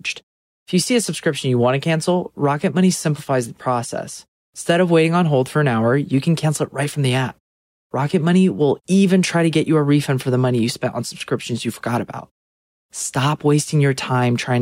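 Nothing is technically wrong with this audio.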